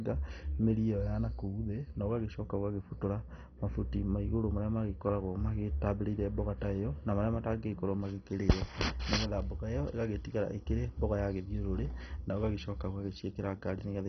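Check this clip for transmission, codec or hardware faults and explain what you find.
Heavy MP2 compression runs through the whole speech clip, likely from a low-bitrate Layer II encode near 32 kbps. Starved sub-bands switch off, leaving nothing above 6.1 kHz, a dull sound with gurgling, granular distortion.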